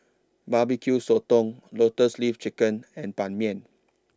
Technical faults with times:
none

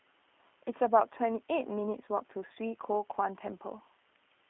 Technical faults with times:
0.00-4.49 G.729 codec

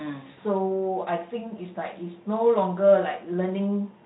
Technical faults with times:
0.31-0.39 VoIP packet loss concealed by the speech codec

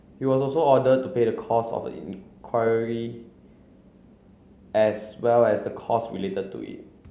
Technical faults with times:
none

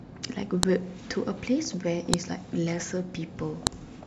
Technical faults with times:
0.63 file header played as audio
2.14 file header played as audio
3.67 file header played as audio

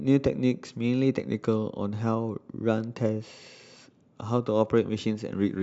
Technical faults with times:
none

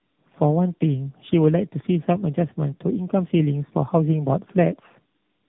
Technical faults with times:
0.00-5.48 tandem speech coding

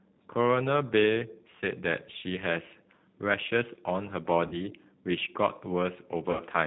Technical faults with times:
0.00-6.66 G.729 codec
4.47-4.58 VoIP packet loss concealed by the speech codec
6.31-6.42 VoIP packet loss concealed by the speech codec

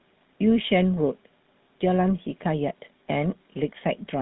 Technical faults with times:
0.00-4.22 GSM full-rate codec

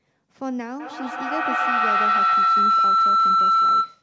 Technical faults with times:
0.80-4.03 feedback howl

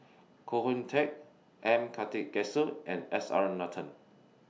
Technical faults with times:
none

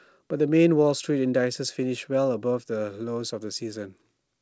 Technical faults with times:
none

